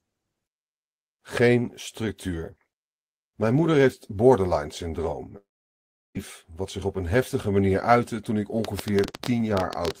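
From 5.37 to 6.17 s, just after "moeder heeft borderline syndroom", there is a long network dropout. The last sound trails briefly into a fading buzz and then goes almost silent until "wat zich op een". About 0.78 s of speech is simply gone, unlike a stall, which would resume where it stopped.

From 8.65 s to the end, starting after "manier uitte toen ik", a train of clicks ticks at about 10.5 per second on an uneven beat. The pulses are alike in shape and well above the speech, which points to likely electrical interference rather than the random crackle of a damaged recording.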